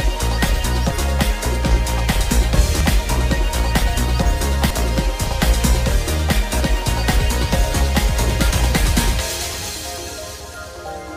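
At 0.91, 2.81, 8.51 and 10.41 s the sound skips forward, losing about a tenth of a second each time with the edges butted together. That regular spacing points to audio missing between chunks, likely roughly 2 s blocks dropping a bit at each handover.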